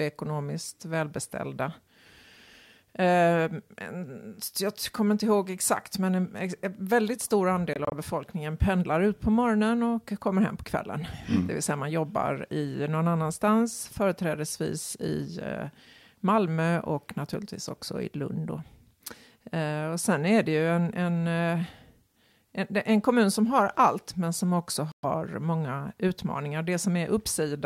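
The speech cuts out briefly twice, resuming as if it had played on. Between "väldigt stor" and "befolkningen pendlar ut på" (7.73 to 7.94 s), short holes of up to 23 ms break the sound. After "allt men som också", before "många utmaningar", a 116 ms gap falls at 24.92 s. These are Bluetooth dropouts, likely from late packets being dropped.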